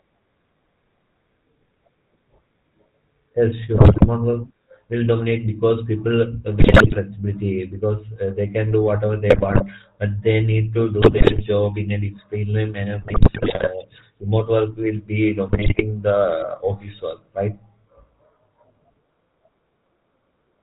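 From the start, the speech carries the GSM full-rate codec at 13 kbps. Excitation is rebuilt from sparse, evenly spaced pulses driving a vocal-tract filter, so the voice sounds plainly buzzy and gravelly, and nothing above 4 kHz survives.

GSM bit errors strike at 3.74–4.09 s, ending just before "work will dominate because"; 6.60–6.97 s; 9.30–9.63 s, between "they can do whatever" and "but they need to"; 11.02–11.43 s; 13.02–13.71 s, between "in a disciplinary manner" and "remote work will be"; and 15.48–15.82 s. Corrupted filter, pitch and gain values reach the decoder, twisting the spectrum and level into squawks, pops and gargling.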